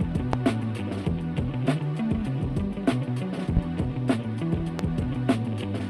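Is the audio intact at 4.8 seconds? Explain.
No. A single loud pop sits from 4.79 to 4.83 s, likely a voltage pulse from a plug, switch or static, peaking well above the surrounding sound, which continues beneath it. The waveform shows one tall, sharp spike; the spectrogram shows a thin vertical broadband stripe.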